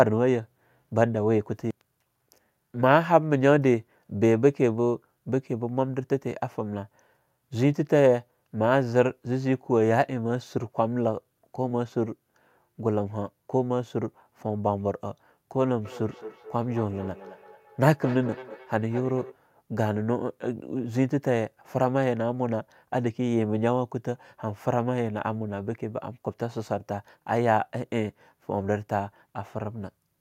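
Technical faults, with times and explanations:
15.85–19.4 s, feedback echo between two devices: speech comes back roughly every fifth of a second, thin and ringing, peaking about 16 dB under the voice. A second device in the room is replaying this one's audio.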